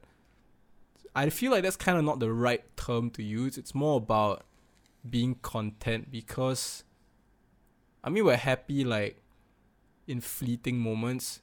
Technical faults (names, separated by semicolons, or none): none